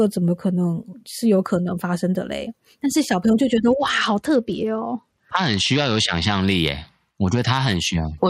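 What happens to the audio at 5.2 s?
At 5.2 s the speech is in the middle of a Bluetooth SBC bit pool drop running from 3.70 to 6.41 s. The link has congested, so the encoder falls back to a much smaller bit budget, which fits a drop from a bit pool around 28 to about 10. The highest sub-bands get starved and the remaining ones are coarsely quantised. The treble goes dull and a gritty noise rides on the speech. On a spectrogram the upper band empties abruptly over that span, with grainy speckle below.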